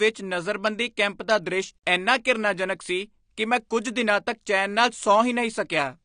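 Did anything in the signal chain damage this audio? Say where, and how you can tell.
Yes, at the codec stage: the speech throughout carries AAC compression artefacts, with nothing above 9.9 kHz and a dull, smeared, warbly texture on sibilants. That points to a low-bitrate AAC-LC encode, likely around 32 kbps, where the encoder trims the top band and coarsely quantises the remaining spectrum.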